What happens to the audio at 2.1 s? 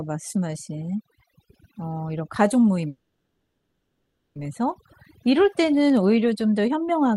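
At 2.1 s the speech carries overdone noise removal, present across the whole clip. A heavy-handed denoiser shuts off frequency bands near its noise estimate, taking quiet speech detail with them, so the background turns near-silent and twinkling rather than steady hiss or dull, muffled highs.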